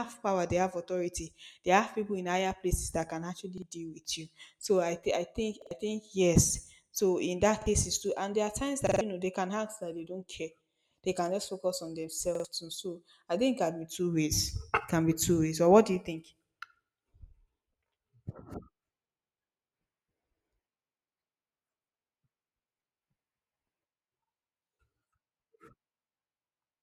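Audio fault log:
3.58–3.62 s, repeated buffer: one 46 ms slice plays twice with a hard join, a brief stutter rather than silence, which sets it apart from a dropout.
5.62–5.71 s, repeated buffer: the same 46 ms slice sounds three times, roughly a tenth of a second of speech lost, heard as a quick stutter.
7.62–7.66 s, repeated buffer: a single extra play of a 46 ms slice, consistent with a 2048-sample buffer arriving late, giving a short doubled blip instead of a gap.
8.87–9.01 s, repeated buffer: four plays of one 46 ms slice, about 150 ms of speech missing; the identical repeats form a rhythmic stutter, not a smeared glitch.
12.35–12.45 s, repeated buffer: the 46 ms slice sounds three times with hard joins at each repeat, replacing around 100 ms of new audio.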